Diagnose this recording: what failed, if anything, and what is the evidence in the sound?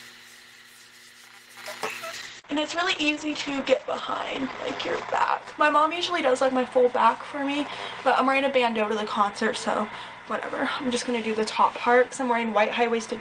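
From 2.1 s to 6.85 s the audio turns coarse and loses its top end, with the bandwidth narrowing from 20 kHz to 8 kHz. The worst stretch holds for 2.68 s before clearing. This is a call bitrate drop in the codec stage: the bandwidth estimate fell, and the encoder coarsened, which fits a fall from about 32 to 10 kbps.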